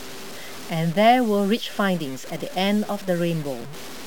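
Throughout, the speech was likely cut to a low bit depth without dither, fitting 6-bit truncation, leaving grainy distortion about 20 dB below the signal that follows every syllable.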